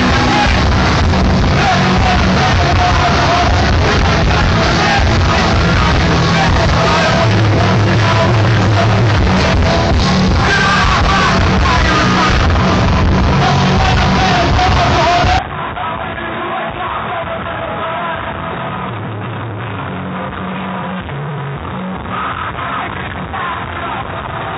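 At 15.39 s the input was likely switched to a poorer device, which stays in use to the end. Nothing now passes above 3.8 kHz, so the sound turns duller at once and drops by roughly 10 dB. A new background noise sits well below it, and there is no gap at the switch.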